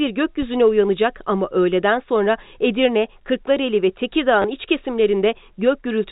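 Right at the start, from about 0.42 to 0.49 s, there's a phantom power thump just before "uyanacak ama". It's a low, dull knock. Something switched the supply on a live input, and that DC step went straight through the coupling capacitors into the signal. It dies away quickly, with a decay of around 15 ms, so it's more of a short punch than a lingering boom.

Later, at about 4.42 to 4.44 s, there's packet loss with the last packet repeated. Roughly 20 ms of audio never arrived, and the receiver filled the gap by replaying the previous chunk. That fits a couple of 10 ms packets going missing. The repeated piece gives a brief, robotic hiccup instead of a clean gap. All of it sits inside the narrow G.711 telephone band.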